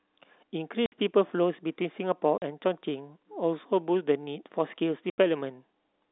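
At 0.86 s, 2.38 s and 5.1 s the speech drops out for 60 ms, 40 ms and 80 ms: packet loss filled with silence, where missing packets were replaced by nothing. The gaps are all multiples of 20 ms, which fits 20 ms packets. Each hole has abrupt edges. On a waveform they show as flat silent stretches, and on a spectrogram as blank vertical bars across the narrow telephone band of the G.711 line.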